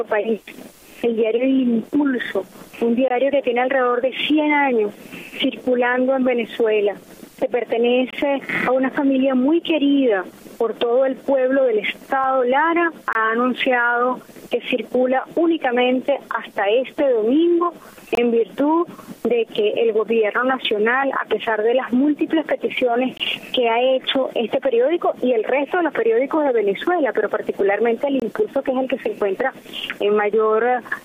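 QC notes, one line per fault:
3.08–3.11, 8.11–8.13, 13.13–13.15, 18.15–18.17, 23.17–23.20 and 28.20–28.22 s: gap between chunks. The audio was carried in 5.0 s chunks, and each join leaves about 23 ms of inserted silence, from padding at the chunk boundary or from each chunk starting late. Nothing is lost, but the sound cuts out abruptly every 5 s, giving short, hard-edged holes at a steady rhythm.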